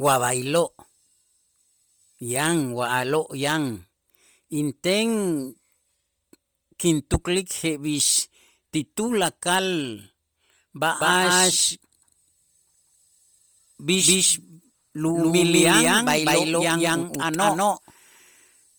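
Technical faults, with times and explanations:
throughout, Bluetooth LC3 compression: heavy low-bitrate coding in 10 ms frames, fitting about 32 kbps LC3, likely strips upper detail and refills it with noise, leaving speech breathy and grainy.
11.01 s to end, doubled audio track: a second full-band copy, likely from a slower capture path, trails about a fifth of a second behind at near-equal level, starting abruptly without room colour.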